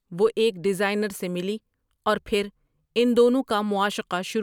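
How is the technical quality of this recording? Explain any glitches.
No glitches can be heard anywhere in this recording.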